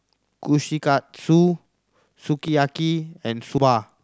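Speech with three abrupt jumps where the audio skips forward with no gap, at 0.8 s, 2.48 s and 3.58 s, losing roughly 20 ms at the first two and around 70 ms at the last. The likely cause is a dropped buffer (overrun), with unread samples overwritten before capture.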